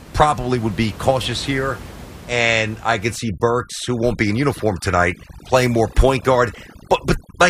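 From 3.16 s, just after "here and I could", and running to the end of the clip, a noise reduction stage is working far too aggressively. This is overdone noise removal. It treats any frequency band close to its noise estimate as unwanted and pushes it down hard, so the quieter parts of the speech are removed along with the room noise, which until then sat about 19 dB below the voice. The background drops and breaks up into twinkling specks.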